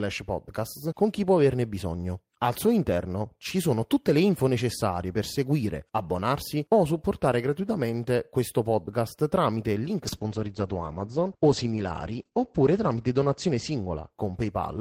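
From 10.05 s to the end, a call bitrate drop takes the encoder from 32 to 9 kbps. The audio band narrows from 20 kHz to 8 kHz, muffling the speech and roughening it. Unlike a fixed low-pass filter, the coarser coding also adds watery artefacts.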